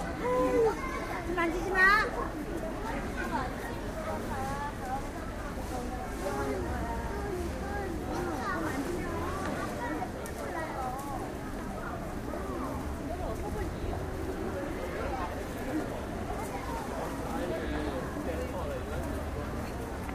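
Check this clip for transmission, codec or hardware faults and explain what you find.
Two brief repeated buffer faults show up, at 5.20 s and 7.54 s. In each, fresh audio reached the output late, so the device played its last 1.45 ms block a second time, which fits a 64-sample buffer. Essentially no audio is lost. Because the repeat is so short, each one sounds like a tiny click. On a waveform the same short segment appears twice with a hard seam, and a spectrogram shows a thin vertical line.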